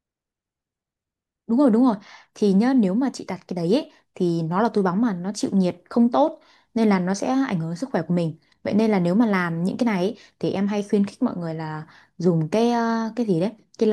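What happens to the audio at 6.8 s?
Nothing goes wrong at 6.8 s; the speech there plays through intact, with no dropout, click, distortion or other fault.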